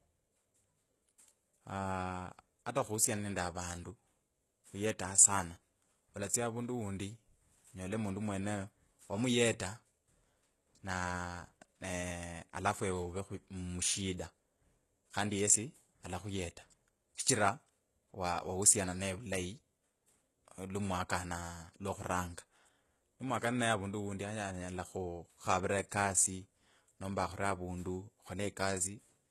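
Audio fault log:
throughout: HE-AAC compression. The speech has nothing above 12.3 kHz, and the damage is heavy. The treble stays bright but sounds synthetic. S sounds come out gritty, metallic and lispy. The likely cause is HE-AAC coding at a very low bitrate, perhaps near 16 kbps. Only the lower band is truly coded. The top is rebuilt by copying lower bands upward under a coarse envelope. Its harmonics no longer line up with those below.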